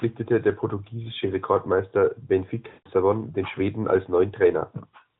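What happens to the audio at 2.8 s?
Between 2.68 and 2.89 s, a run of lost AMR speech frames failed their checksum, and the narrowband decoder concealed the gap by repeating its last good pitch and vocal-tract settings at steadily falling gain. The missing 180 ms fits about nine consecutive 20 ms frames. The sound smears into a drawn-out, static tone that fades to silence, and when decoding resumes the voice comes back briefly weak or rough.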